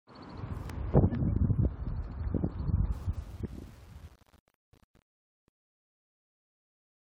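From 2.84 s to the end at 7.1 s, the fade-out grows gritty and grainy as it thins. This is truncation distortion on a fade: the gain stage drops low bits without dither, which fits an 8-bit path, so the waveform collapses into coarse steps.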